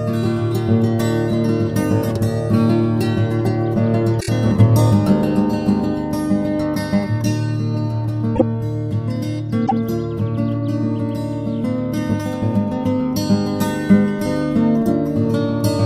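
Stretches of compressed frames were played more than once, so the decoder replays the same sliver of audio. At 4.19 to 4.29 s a 26.1 ms block, which fits a single frame, sounds four times in a row, adding 78.4 ms. At 8.35 to 8.42 s a 52.2 ms block repeats once, and at 9.65 to 9.72 s a 26.1 ms block repeats once. Each repeated frames event is heard as a brief stutter.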